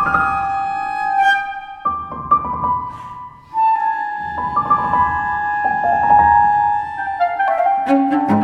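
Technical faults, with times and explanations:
No technical faults, with times and explanations, are present.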